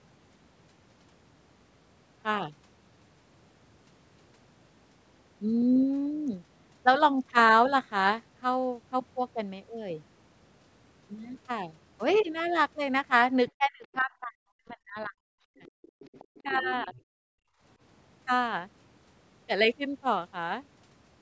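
Around 13.57 to 15.13 s the talker gets pulled down in chunks, about a second's worth in all, dropping by roughly 40 dB at worst. That's speech suppressed in double talk: both ends were likely talking, so the echo canceller ducked everything it couldn't sort out. It happens again at 15.3 to 15.56 s, also deep, and more gently (around 10 dB) from 16.43 to 16.97 s.

Tucked into that stretch is the other side's voice leaking through: a faint scrap at 15.02 s, a longer trace from 15.58 to 16.42 s sitting roughly 30 dB under the talker, and a louder blip at 16.62 s, only about 15 dB down. That's likely loudspeaker echo the canceller didn't fully scrub from the mic.

Then from 17.25 to 17.61 s the room tone itself drops out, by about 35 dB, before snapping back. That's background gated by the echo canceller, most likely clamping the mic hard while the loudspeaker was playing.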